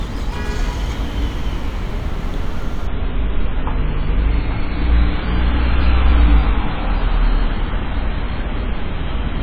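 At 2.87 s the sound abruptly turns dull and watery, with nothing above about 4.8 kHz and swirly codec artefacts, lasting to the end without any gap. This is an adaptive stream at a lower bitrate, a sudden drop that fits a fall from roughly 128 to 16 kbit/s MP3 after the connection slowed.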